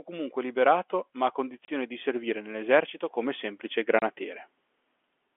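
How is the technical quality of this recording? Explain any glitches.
The speech comes through a telephone-band line and has two kinds of glitch: a slow rise in level and two brief dropouts.

From 0.06 to 4.23 s, voice and background swell together by about 9 dB. This is automatic gain rising: the gain control judged the input too quiet and kept turning it up.

At 1.65–1.68 s and 3.99–4.02 s, the speech cuts to dead silence for 30 ms, with hard edges. This is packet loss filled with silence, fitting one lost packet each time.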